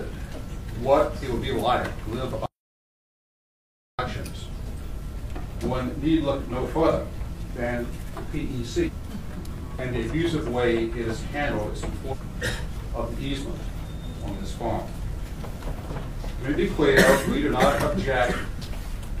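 At 2.46 s the audio drops out to silence and stays gone until 3.99 s, about 1.53 s in all. The gap is silent, with no room tone, hiss or decaying tail underneath. That sets it apart from a fade, a gate closing or a quiet passage. The cut in and the return are both abrupt and in mid-flow, most likely because the input was lost while the recorder kept writing silence.

Later come two short glitches from damaged data in a compressed stream: one from 8.83 to 8.89 s, and another from 12.08 to 12.14 s, each about 65 ms long. The decoder hits corrupted frames, loses sync and searches for a valid frame header again.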